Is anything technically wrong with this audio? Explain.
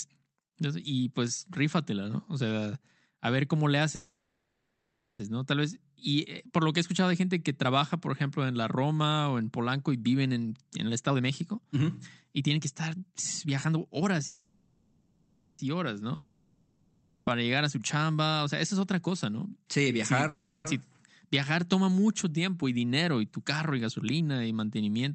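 Yes. The speech has three kinds of fault.

Call audio freezes occur at 3.95 to 5.21 s, after "a ver cómo le", then at 14.27 to 15.61 s and 20.29 to 20.67 s. Delayed packets likely emptied the jitter buffer. The last sound is stretched into a fading buzz. In the first freeze it falls to silence for about a second. Each one then resumes with nothing lost, just later.

A jitter buffer speed-up runs from 10.44 to 20.12 s, starting after "y viven". The receiver drained excess buffered audio by cutting tiny pitch-period slices repeatedly, removing about a second overall. The speech plays about 11% faster at unchanged pitch and sounds hurried. A shorter one runs from 22.62 to 24.21 s, between "viajar toma mucho" and "y mantenimiento entonces". It is about 9% faster and trims only a sliver.

A long network dropout runs from 16.15 to 17.37 s. Audio likely stopped arriving, and about 1.12 s was never played. 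A fading buzz covers the gap before the speech returns further on, with that stretch missing.

The Opus call path, limited to 8 kHz, sits underneath these faults.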